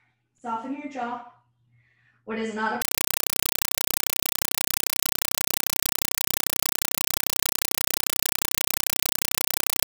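Compressed stream played as audio, 2.82 s to the end: undecoded AC-3 data passed as samples replaces the sound with loud chattering static, 5.33 ms bursts 31.25 times a second.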